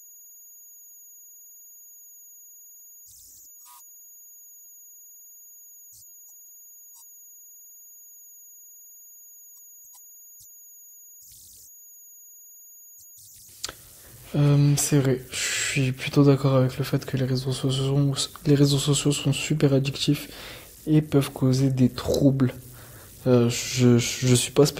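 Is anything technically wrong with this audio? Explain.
Yes. Converter idle tones run through the whole speech recording: a faint whistle around 7 kHz, sitting about 28 dB below the speech. The delta-sigma converter was running without dither, so at low input levels its modulator settles into repeating bit patterns whose rate turns into an audible tone. The whistle stands out in the pauses and turns grainy under quiet passages. Its high, non-harmonic pitch sets it apart from mains hum, which sits low with harmonic buzz.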